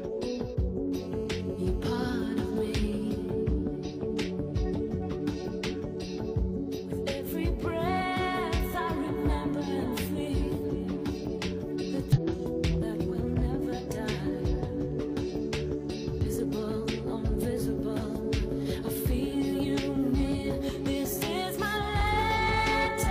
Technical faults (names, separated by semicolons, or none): hard clipping; GSM phone buzz; damaged data in a compressed stream